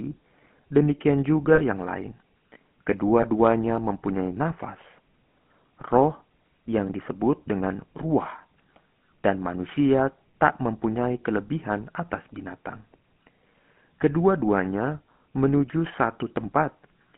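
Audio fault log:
Throughout: GSM full-rate codec. The sound has a plainly audible buzzy, gravelly roughness. The codec rebuilds it from a vocal-tract model driven by sparse, regular pulses, losing fine detail. The band runs from 150 Hz to 3.4 kHz, which fits 13 kbps full-rate coding.
1.54–1.62 s and 3.22–3.25 s: lost GSM frames. The sound briefly freezes into a rough, metallic ring as the last good frame is repeated. The first gap lasts 40 ms, fitting two lost frames. The second lasts 20 ms, fitting one, just before "mempunyai nafas".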